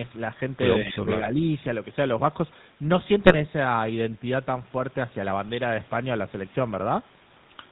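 GSM full-rate codec damage runs through the whole speech clip. The coder models the vocal tract and excites it with a sparse, regularly spaced pulse train, and nothing above 4 kHz survives, so the voice sounds band-limited, buzzy and gravelly, consistent with a 13 kbps full-rate stream.

GSM bit errors strike from 1.22 to 1.29 s and again from 3.24 to 3.43 s. Corrupted filter, pitch or gain parameters reach the decoder and distort the spectrum or level frame by frame, producing squawks, pops and gargling, a brief burst first and then a longer one.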